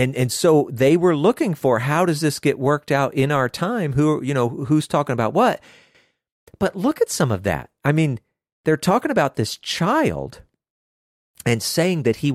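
No technical faults can be heard anywhere in this speech recording. Nothing in it calls for a timestamp or a fix.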